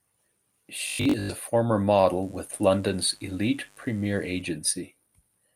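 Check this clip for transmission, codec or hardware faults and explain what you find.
Three faults show up: a robotic stretch, a brief stall, and a longer section of mains hum.

From 0.87 to 1.29 s, just before "a former", the speech turns into robotic sound, likely from repeated short buffers. Most of that stretch sounds like the same slice replayed, and the resulting buzz at 50 Hz fits 20 ms segments being looped while new audio was skipped. The voice takes on a rigid, metallic drone that still roughly tracks the syllables. On a spectrogram, evenly spaced 50 Hz harmonic lines appear, and the waveform shows identical 20 ms cycles.

From 2.01 to 2.05 s, right after "a former", there is a short stall from a late packet. A packet missed its playout time, so the receiver held the last sound for 21 ms until it arrived, then resumed where it had stopped. Nothing was lost, but playback now runs 21 ms later. 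It is heard as a tiny hitch, a sound held slightly too long. The waveform shows a brief repeated or frozen segment, and the spectrogram shows a short horizontal smear.

From 2.23 to 4.42 s, also after "a former", a mains buzz sits under the speech at about 35 dB below the signal. It is a steady, raspy hum based on 50 Hz, the kind that switching spikes from a dimmer, a rectifier or poor shielding inject at twice the mains rate. On a spectrogram it appears as a comb of flat horizontal lines at multiples of 50 Hz extending well up the spectrum. In quiet gaps, the waveform shows a small periodic ripple in place of silence.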